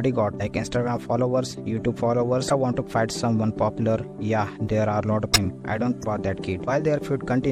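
Throughout, the sound is plainly watery and swirly, with the treble dulled and faint detail flickering in and out. This is likely MP3 compression at a low bitrate, consistent with about 64 kbps, where the encoder drops high frequencies and weak components to save bits.

From 2.47 to 2.52 s, 5.32 to 5.36 s and 6.00 to 6.04 s, short blips break through, each a brief glitch. These come from damaged data in the compressed stream: the decoder misreads corrupted frames, loses sync and jumps ahead to the next readable frame.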